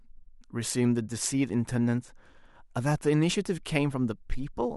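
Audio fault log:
Nothing stood out on listening to this speech recording.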